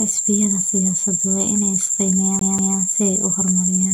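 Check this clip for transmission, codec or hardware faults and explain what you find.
Two faults are present: a constant codec degradation and a brief skip near the end.

Generation loss runs through the whole clip. The likely cause is lossy re-encoding several times over, which fits MP3 at around 128 kbit/s. Each pass adds its own quantisation on a shifted frame grid. The speech sounds swirly, smeared and hollow, with soft, blurred attacks.

A CD stuck on one turn occurs from 2.39 to 2.78 s. A scratch sends the laser back to the same spot each revolution. About 0.19 s of speech repeats twice, with a tiny mute at each jump. It is a quick, even stutter.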